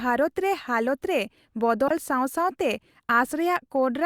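At 1.88 to 1.91 s the speech is broken by a corrupt frame decoded: a compressed frame arrived with flipped bits and the decoder played it anyway, so misread gains and codes put energy at the wrong frequencies. It sounds like a brief glitch, peaking at about -15 dBFS. Its 30 ms length suggests a few consecutive frames were damaged. A spectrogram shows a short block of misplaced energy, and the waveform shows a sudden burst.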